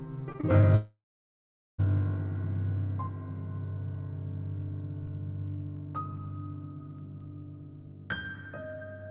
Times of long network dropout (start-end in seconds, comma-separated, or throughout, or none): 0.75-1.86